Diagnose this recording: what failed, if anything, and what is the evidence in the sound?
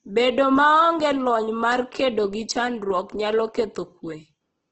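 Codec stage: speech is grainy and rough throughout, nothing above 8.2 kHz, likely Opus compression fitting roughly 12 kbps; noise-filled bands, not MP3's swirling holes.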